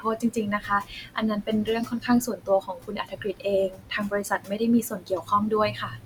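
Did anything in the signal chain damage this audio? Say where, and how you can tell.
Yes. The damage happens in call processing, where the noise suppressor is cutting into the speech itself. It happens in five stretches: 0.0–1.69 s, 1.85–3.46 s, 3.69–4.61 s, 4.82–5.32 s and 5.71–6.06 s. In each one, soft consonants and word endings fall by up to about 18 dB (up to about 17 dB at 4.82 s), adding up to roughly a second in the longer spans. The room noise, about 20 dB below the speech, is turned down at the same moments. That shows the suppressor is treating quiet speech as noise. A network dropout would leave gaps or clicks instead, and the suppressor's dips follow the quiet parts of the speech.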